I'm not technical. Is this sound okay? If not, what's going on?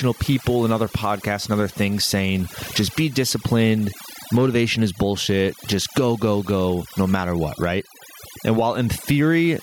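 No, it has two problems, and both run through the whole recording rather than at particular moments.

The first is overdone noise removal. A cleanup tool was pushed too hard on a noisy recording, so whenever parts of the sound got close to what it thought was background noise, it switched them off. The background drops, with little twinkly specks in it, because quieter details got thrown away along with the noise.

The second is gain pumping. The level keeps swinging a long way down on loud moments, a big swing rather than a small one. Loud and soft parts end up squashed close together. The likely cause is the recording level being set far too high, with an automatic limiter yanking it back down on every loud moment.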